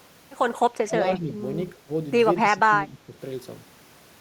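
Speech suppressed in double talk at 0.83–0.96, 1.18–1.42, 1.75–1.89 and 2.42–3.17 s: the speech dips by up to about 15 dB, likely from echo-canceller ducking during overlapping talk.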